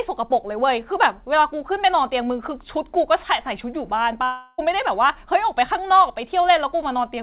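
At 4.24 s the speech breaks off and does not return until 4.60 s. For about 0.34 s the last sound is stretched into a buzzy, fading tone. No silence is left in the gap. The missing speech never comes back, and the audio resumes past it. This is a long network dropout. Its likely cause is packets that never arrived, so the receiver filled the hole itself. Throughout, nothing is heard above 4 kHz, which fits a G.711 mu-law call codec.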